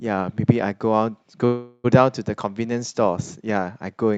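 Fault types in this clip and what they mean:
Call audio freeze: from 1.45 to 1.86 s the last sound is stretched and fades, likely because late packets emptied the jitter buffer; nothing is lost.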